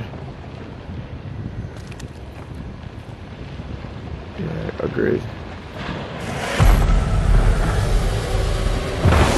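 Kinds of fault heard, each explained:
No kinds of fault are heard in this clip.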